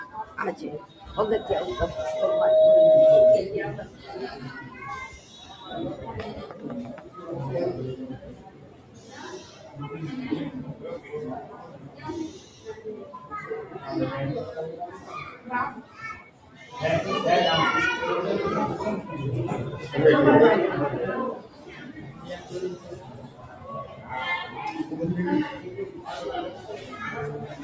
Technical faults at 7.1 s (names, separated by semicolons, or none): noise suppressor applied to music or sounds; sound cut by the noise suppressor